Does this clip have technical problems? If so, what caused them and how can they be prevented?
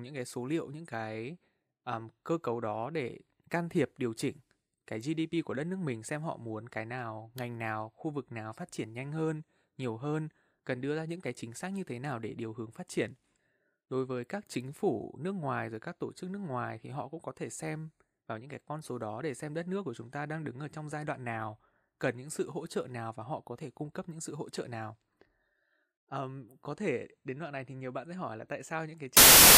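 Yes. From 29.17 s to the end at 29.58 s, the speech turns into loud, harsh broadband noise. These are samples built from the wrong bytes: misaligned or swapped bytes make the low bits dominate each value. A spectrogram shows broadband noise, and the waveform becomes a dense block. Verifying byte order and frame alignment when reading the data prevents this.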